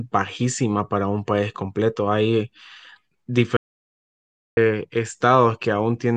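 At 3.57 s the input to the recording chain was likely lost, through a disconnected device, failed link or mute, while the recorder kept writing silence. The result is an audio dropout to silence: the speech cuts off abruptly, about one second of silence with no room tone follows, and the speech resumes mid-flow at 4.57 s.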